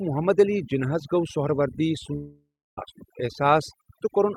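Overdone noise removal runs throughout: aggressive suppression zeroes noise-level bands, and a spectrogram shows black gaps speckled with isolated twinkling bins.

After "جِناح ہس گوٚو سہروردی", from 2.15 to 2.79 s, the sound smears into a fading buzz or hiss, then goes silent. This is likely a long network dropout, losing about 0.62 s, visible as a decaying waveform tail and then a flat line.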